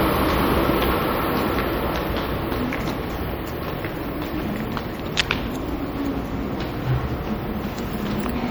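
These everyday sounds carry plainly audible coding damage from start to finish, most likely MP3 compression at a low rate, which fits roughly 64 kbps. Weak frequency lines drop in and out between frames, giving a watery, swirling texture with metallic chirps in bright detail and smeared attacks. A simple low-pass filter would only dull the treble, but here content survives up to about 21.5 kHz. The damage is the frame-to-frame flicker, not missing top end.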